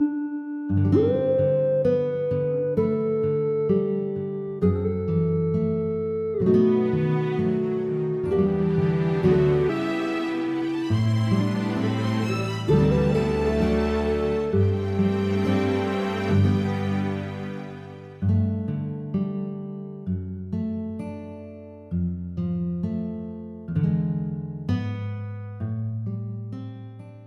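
A jitter buffer speed-up runs from 10.15 to 11.55 s. The receiver's buffer had built up more audio than its target, so it trimmed short pitch-period-sized pieces again and again, roughly 150 ms in total. The sound plays about 11% fast at unchanged pitch, briefly hurried.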